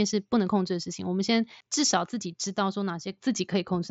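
No faults are present in this speech clip, which has come through a Bluetooth mSBC headset link, so the band stops at about 7.7 kHz and there is a light graininess typical of that wideband codec.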